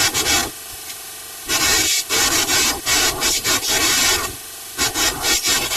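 It's a speech clip with channel delay (comb filtering) throughout: one side arrives about 3 ms late, and summed to mono the shared content cancels at evenly spaced frequencies starting around 200 Hz, so the whole thing sounds hollow and phasey.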